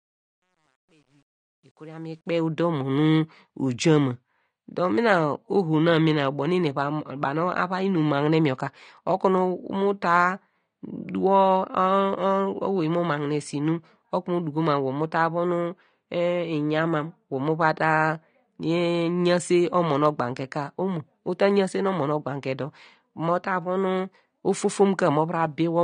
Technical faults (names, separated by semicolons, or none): AAC compression; truncation distortion on a fade